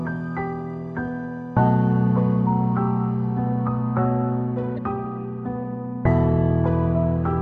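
All the way through, the audio has a watery, swirly quality with a dulled top end, which is most likely MP3 compression. An encoder short on bits chops off the treble and lets faint detail flicker on and off, and the damage here fits a bitrate around 64 kbps.

From 4.74 to 4.79 s there's a brief glitch. That's damaged data in the compressed stream. The decoder hit corrupted frames, lost sync, and skipped forward to the next frame header it could read.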